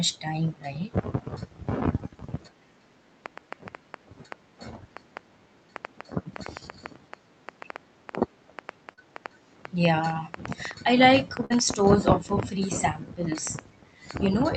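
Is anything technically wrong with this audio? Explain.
Yes, three faults affect this speech clip.

From 3.26 s to the end, a train of clicks runs at about 4.6 per second with irregular spacing. The likely cause is electrical interference or a faulty connection or power supply injecting pulses. They sound like uneven ticking, peaking roughly 10 dB above the speech and audible in pauses too.

At 8.93 to 8.99 s comes a short concealed packet loss. About 40 ms of audio never reached the decoder in time. The receiver extended the preceding sound for 38 ms, then blended back, so you hear a brief smear or wobble.

At 11.45 to 11.52 s there is a burst of packet loss. Around 40 ms was lost and 48 ms was synthesised from the last sound while fading it down. This produces a short held buzz or fading hiss, and the material in that gap is gone.

The Opus call path carries audio up to about 8 kHz.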